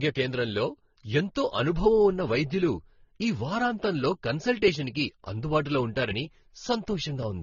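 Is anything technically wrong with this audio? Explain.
Yes. Throughout, the speech has nothing above about 6.9 kHz and layered, mismatched smearing and swirl, likely transcoding between lossy codecs. That mix of several codecs' artefacts, rather than one codec's uniform signature, sets it apart from simple low-bitrate compression.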